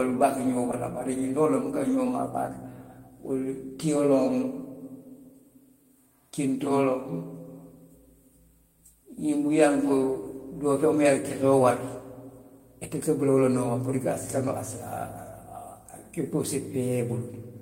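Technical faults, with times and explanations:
No technical faults can be heard in this speech recording. There are no dropouts, clicks, distortion or timing problems to report at any point.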